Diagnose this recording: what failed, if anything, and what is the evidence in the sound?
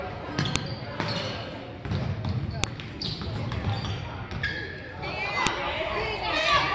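Sharp, loud clicks snap through at 0.56, 2.64 and 5.47 s: a file header played as audio, where joined WAV pieces kept their header bytes at storage.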